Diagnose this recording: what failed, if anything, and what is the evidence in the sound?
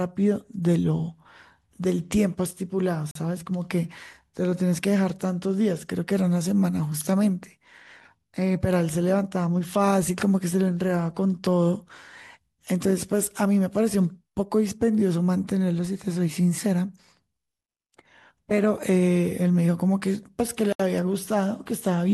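Two brief dropouts in the speech, 42 ms of silence at 3.11 to 3.15 s and 71 ms at 20.73 to 20.80 s, point to a likely Bluetooth stall on the wireless playback link. Delayed packets let the receiving buffer run empty, so output went silent until data resumed.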